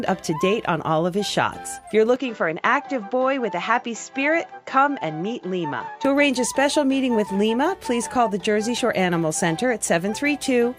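Input switched to a poorer device, 2.16 to 6.05 s: the sound abruptly loses everything above 7.6 kHz and gains faint new hiss, likely a change to a narrower-band microphone.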